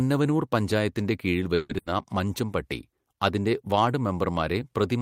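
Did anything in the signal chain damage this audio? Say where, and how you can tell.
Yes. At the network stage, a call audio freeze runs from 1.55 to 1.77 s: the sound is stretched into a fading buzz or hiss for about 140 ms, likely because delayed packets emptied the jitter buffer. A spectrogram shows flat, smeared harmonics dimming out, then speech resuming intact.

Immediately after, a burst of packet loss from 1.78 to 1.88 s hides about 80 ms of lost audio behind the last sound held and turned down. The waveform shrinks through that stretch, then restarts abruptly further along, with the missing 80 ms never played.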